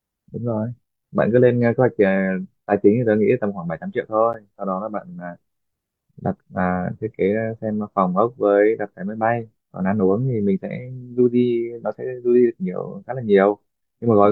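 At 4.33 s the speech drops out for about 9.5 ms in a gap between stream segments. The timestamps of two adjacent segments, which fits segments about 4 s long, fail to meet, and the player fills the hole with silence. Nothing is lost, but the sound stops and restarts abruptly, heard as a tiny click or tick. The waveform shows a flat, near-silent stretch with hard edges, and the spectrogram shows a thin vertical blank stripe across all frequencies.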